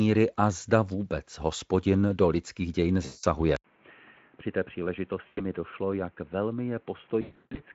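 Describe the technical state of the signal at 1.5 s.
At 1.5 s the speech is intact, with no fault present at that moment beyond the light coding character of the Speex path it travels through.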